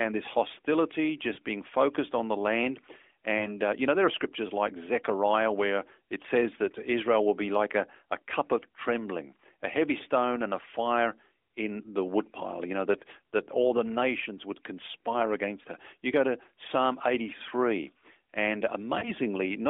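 Lost AMR speech frames at 1.34–1.38 s, 3.38–3.54 s and 19.00–19.11 s: each time one 20 ms frame was corrupted, so the decoder replayed the previous settings at falling gain, giving a brief dip or warble.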